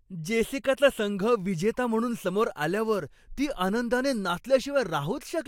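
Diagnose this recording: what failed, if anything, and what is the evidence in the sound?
No failure detected in this recording.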